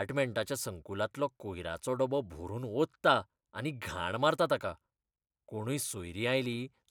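Speech recording with no technical faults to report.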